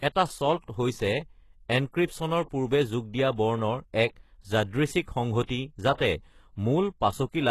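Throughout the speech, the treble sounds false. S sounds turn gritty and metallic, and nothing reaches above 12.3 kHz. HE-AAC compression is the likely cause, at a bitrate that points to about 16 kbps, with the top band rebuilt from copied lower frequencies.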